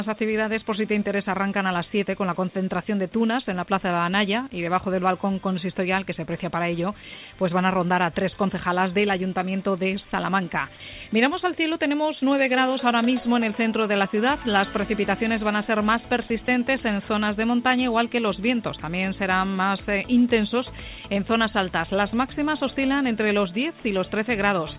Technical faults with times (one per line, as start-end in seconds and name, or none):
16.28-16.48 sound dropped by the voice detector